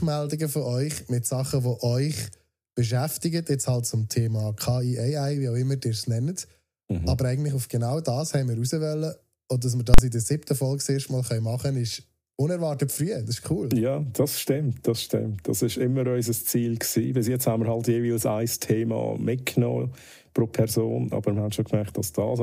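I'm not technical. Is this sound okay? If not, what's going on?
No, there's one real problem. At about 9.94 seconds there's a sharp, very loud bang lasting about 43 ms, until roughly 9.98 seconds. That's a fault called invalid numbers at full scale. A calculation inside the audio processing broke and produced garbage values, and the output got pinned at its loudest possible level for that short chunk. The chunk's length fits a 2048-sample processing block.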